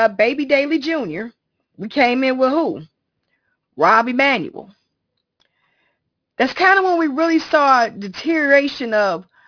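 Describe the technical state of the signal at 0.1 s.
At 0.1 s the speech already carries aliasing, as it does throughout: content above 5.5 kHz folded back unfiltered, sitting about 20 dB down, leaving sibilants gritty and metallic.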